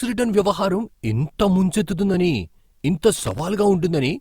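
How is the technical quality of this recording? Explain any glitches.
The recording has one glitch. From 3.16 to 3.40 s, right after "ముంచెత్తుతుందని ఇంత", loose connector crackle breaks in. A worn or dirty contact is making and breaking as it shifts. That chops the speech, heard as a brief, irregular scratchy burst.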